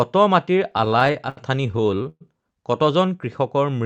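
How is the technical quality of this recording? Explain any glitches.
The recording has one clear problem, repeated stalls (stutter), heard over a call path whose high frequencies stop around 8 kHz.

From 0.71 to 2.23 s, late-arriving packets drained the jitter buffer about 21 times. The receiver stretched and faded the last sound, so the speech drags and stutters, with pauses up to 114 ms.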